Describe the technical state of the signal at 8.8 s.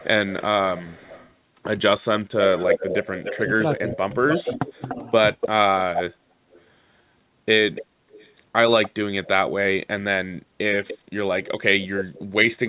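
At 8.8 s the signal is inside an echo leak running from 7.75 to 9.28 s: a delayed copy of the speech trails the original by about 293 ms, sitting roughly 15 dB quieter. The likely cause is a loudspeaker at the far end whose echo canceller let part of the played-back sound return down the line. Unlike room reverberation, which smears into a decaying tail, this is a distinct repeat arriving a fixed interval later, within the same 4 kHz call bandwidth.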